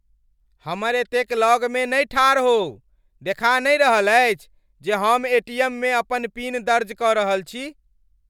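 Nothing stood out as a technical fault on listening to the speech in this recording.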